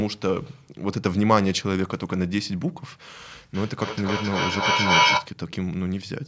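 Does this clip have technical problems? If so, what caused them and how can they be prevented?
Yes. From 3.54 to 5.35 s there is feedback echo between two devices: one device on the call plays the other's microphone signal aloud, that microphone picks it up again, and neither echo canceller removes sound it did not play itself. The speech returns roughly every third of a second, each pass thinner and more ringing, and the loop builds to about 5 dB above the speech. On a waveform this looks like evenly spaced copies of each burst that grow instead of shrinking. A spectrogram shows the same harmonic patterns repeated at that spacing, narrowing into ringing bands as the loop feeds back. To prevent it, keep only one device in the room connected with its speaker and microphone active, or have everyone else use headphones or mute.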